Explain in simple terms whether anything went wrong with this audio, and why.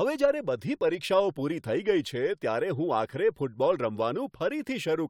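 Nothing went wrong here; the speech stays steady throughout, with no audible fault at any point.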